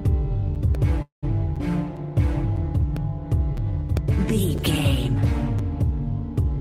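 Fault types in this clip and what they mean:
Gap between chunks: The audio arrives in 1.0 s pieces with a hard-edged silent hole of about 7 ms at each join, from 0.55 s through 5.59 s. Nothing is lost; the sound is pushed apart, which distinguishes these holes from the dropouts.
Periodic USB or driver dropouts: Roughly five brief losses of about a millisecond each, replaced by silence, recur every 1.0 s between 0.75 and 4.97 s. They come across as regular ticks, and unlike the chunk gaps, a sliver of audio is actually missing.
Call audio freeze: From 1.02 to 1.25 s the last sound is stretched into a fading buzz or hiss, then goes silent for about 130 ms before resuming exactly where it stopped. This inserts 205 ms of delay without losing any audio, likely because the receiver's buffer ran dry.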